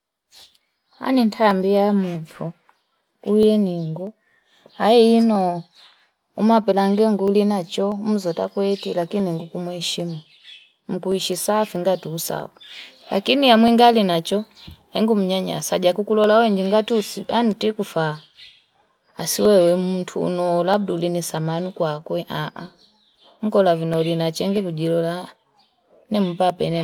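Clock drift buffer slips from 0.23 to 26.5 s: a regular click every 0.641 s through the speech, likely two mismatched device clocks forcing small sample drops or repeats.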